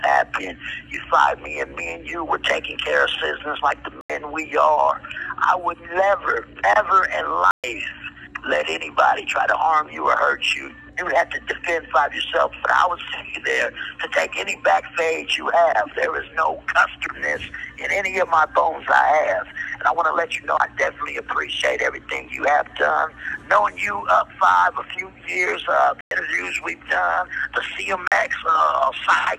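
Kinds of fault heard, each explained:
Block of digital silence: four holes of 43 to 128 ms of silence, cutting out and back abruptly instead of fading like a dropout.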